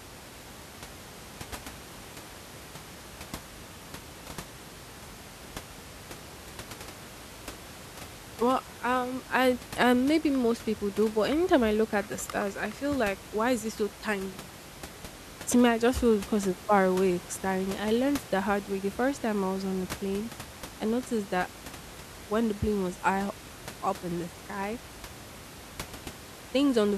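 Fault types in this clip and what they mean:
Nothing stood out on listening to this speech, with only the room's background noise sitting about 17 dB below it as part of the recording.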